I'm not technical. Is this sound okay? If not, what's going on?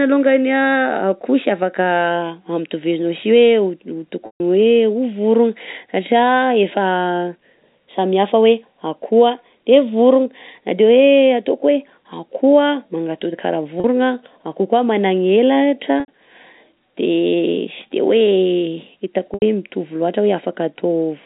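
No. Brief packet loss with pitch repetition occurs at 4.26 s (longest, 140 ms), 13.8, 16.0 and 19.34 s. The shortest sounds like a briefly held, buzzy tone, while the longer ones fade into silence before the speech returns, through ordinary telephone-quality G.711 coding.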